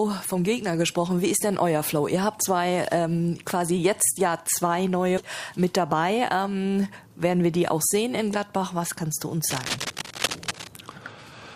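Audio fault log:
5.17–5.19 s skip ahead: Playback jumps forward with no fill, dropping roughly four tenths of a second, so the sound on either side is butted together and the timeline pulls ahead. The waveform envelope changes abruptly at one point, and a spectrogram shows a hard vertical seam.
5.53–6.55 s jitter buffer speed-up: The receiver trims surplus buffered audio by cutting out many short pitch-period pieces, about 70 ms in total, so the sound runs 7% fast at unchanged pitch and feels hurried. Spectrogram harmonics keep their spacing while events crowd closer together.
9.49–10.68 s cable scratch noise: A dense, irregular scratching rustle sits over the sound only a few dB below it, likely from a worn cable or connector being moved. A spectrogram shows clustered broadband vertical speckles, and the waveform carries jagged, spiky bursts riding on the signal.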